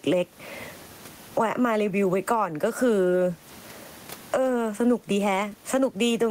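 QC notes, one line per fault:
throughout, gain pumping: gain swings around 20 dB with loud speech, squashing loud and soft parts closer in level, likely from limiting on excessive gain; gating would cut to silence.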